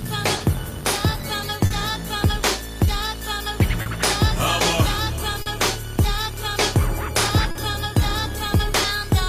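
Clock drift between sender and receiver runs through the whole clip. The sending clock is about 2 percent slow, so the jitter buffer keeps draining and the receiver pads out short stretches. Unlike one-off dropouts, these small timing hiccups recur at uneven intervals from start to finish.

Short stalls from a late packet fall at 0.37, 1.66, 3.82, 5.42 and 7.51 s. Each lasts about 60 to 70 ms, with the last sound held for 30 to 40 ms with a slight buzz or dip. Unlike packet loss, the sound then resumes exactly where it stopped, with nothing cut out.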